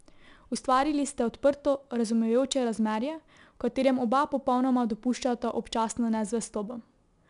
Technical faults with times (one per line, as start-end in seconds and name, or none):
0.00-7.29 4-bit ADPCM compression